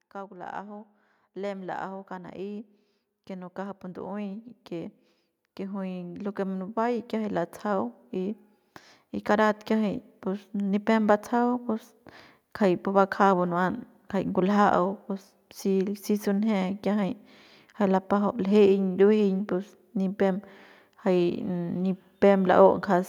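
Speech whose level climbs steadily from 0.12 s to 11.15 s is the mark of automatic gain rising: the gain control judged the input too quiet and kept turning it up, by about 19 dB in total over those eleven seconds. Voice and background noise swell together, so the noise floor rises along with the speech. On a waveform the envelope widens like a slow ramp, and a spectrogram shows every band, including the gaps between phrases, brightening gradually across that span.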